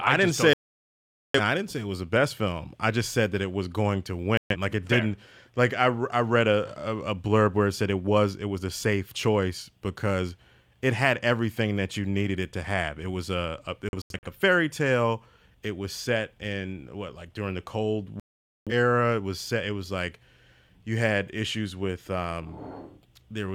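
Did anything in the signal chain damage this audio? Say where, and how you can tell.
Yes: a digital broadcast dropout at reception, where the receiver lost frames and muted. The speech vanishes at 0.53–1.40 s after "didn't just don't say", at 4.37–4.56 s after "it was going to", in scattered short holes at 13.89–14.27 s before "fairy tale", and at 18.20–18.72 s. Everything sent during those gaps is lost.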